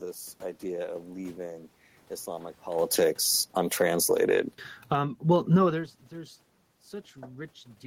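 From 2.69 s to 5.7 s, automatic gain falling: the gain control judged the input too loud or its background noise too strong and pulled it down by about 12 dB, so speech and room noise sink together.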